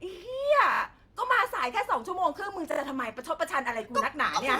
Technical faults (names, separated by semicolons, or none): repeated buffer